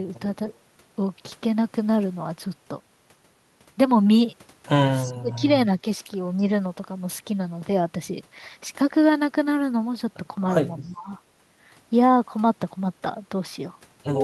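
Speech suppressed in double talk at 5.04 to 5.48 s: the speech dips by roughly 25 dB, likely because an echo canceller turned down its own talker while the far side was speaking. An echo leak at 10.84 to 10.9 s adds a faint copy of the speech, about 40 dB down and 330 ms late. This is likely loudspeaker echo that the canceller failed to remove. Right after, at 10.88 to 11.11 s, the speech is suppressed again, dropping by about 20 dB.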